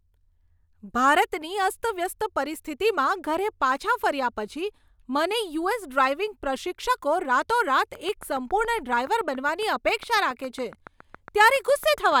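From 7.95 s, just after "પ્રશિક્ષકો રાતોરાત", a train of clicks runs to 12.13 s: some thirty near-identical pulses at a steady 7.2 per second, peaking about as loud as the speech itself. They tick over the talking and through the pauses, likely from electrical interference or a faulty connection or power supply. On the waveform they show as evenly spaced sharp spikes; a spectrogram shows thin vertical lines spanning the full frequency range at regular intervals.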